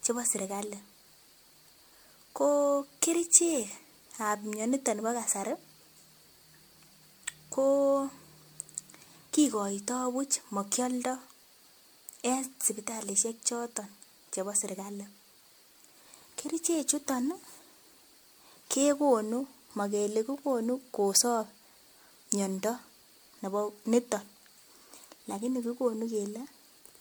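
Generation loss throughout, likely from around five MP3 re-encodes near 96 kbit/s. Noise stacking on shifting frame grids leaves the speech swirly, hollow and smeared, with blurred attacks.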